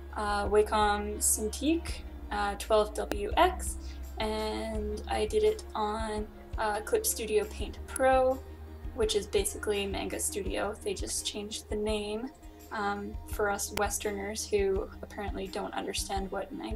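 Three sharp snaps sit on top of the sound at 3.12 s, 7.96 s and 13.77 s. Each is an electrical switching spike, lasting only a few milliseconds. They peak around -10 dBFS, the middle one a little lower. A nearby switch or motor arcing into the line is the likely cause.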